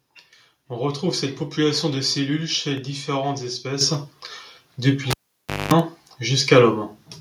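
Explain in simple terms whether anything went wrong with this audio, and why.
Two things went wrong here.

First, the microphone volume stepped up. At 3.81 s, just after "de cellules chez différentes", the call software decided the microphone was too quiet and turned its input volume up in a single jump instead of gradually. The voice and the background noise behind it suddenly get noticeably louder together, in the middle of the speech, and they stay at that higher level.

Second, a cable was pulled and plugged in. From 5.11 s to 5.74 s, a live cable was pulled out and pushed back in. There is a pop, then the sound drops to near silence for about 0.58 s. For about 0.22 s the plug is only partly touching, and it picks up a buzz from the 50 Hz mains power. Another pop follows as the sound comes back.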